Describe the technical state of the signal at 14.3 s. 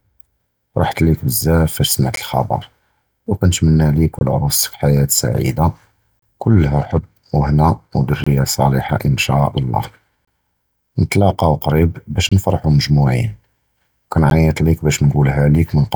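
At 14.30 s, a gap between stream segments, with 2-second segments whose time stamps leave a hole, lets the player insert about 13 ms of silence, a hard-edged dropout in the speech.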